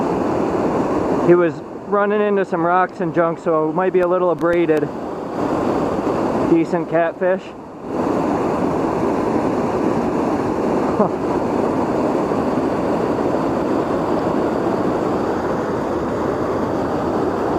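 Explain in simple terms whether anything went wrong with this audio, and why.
Around 4.03 to 4.78 s there's a short burst of processor overload crackle. The computer couldn't keep up with its tiny audio chunks, a millisecond or two each, and missed a handful. Each miss dropped a sliver of silence, and those gaps add up to a gritty crackle.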